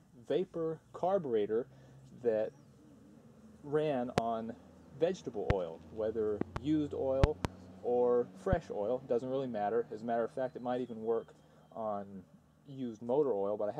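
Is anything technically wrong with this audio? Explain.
Yes, there are loud pops at 4.18–4.20 s, 5.50–5.53 s, 6.41–6.59 s (a double), 7.24–7.47 s (a double) and 8.53–8.55 s. Each one peaks roughly 15 to 25 dB above the sound, which continues underneath. A likely cause is a voltage pulse from a switch, plug, static or driver glitch.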